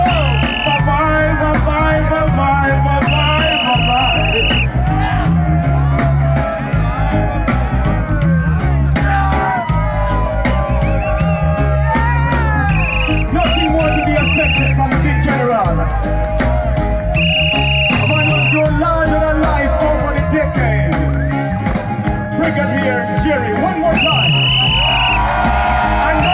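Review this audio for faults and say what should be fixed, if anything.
Nothing here needs fixing; I didn't catch any technical problems worth flagging, so it can be left as it is.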